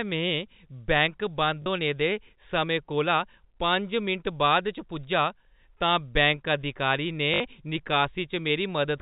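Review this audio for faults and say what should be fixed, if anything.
Packet loss with last packet repeated occurs twice: a 40 ms gap at 1.62–1.66 s and a 60 ms gap at 7.34–7.40 s. In each, the receiver fills the hole by replaying the previous packet. The run takes on a brief robotic buzz. The buzz rate fits 20 ms packets, with two and three repeats respectively. The missing sound above 4 kHz is simply the G.711 coding at work. To prevent this, reduce network loss and replace repeat-last-packet concealment with proper packet loss concealment that fades or interpolates across gaps.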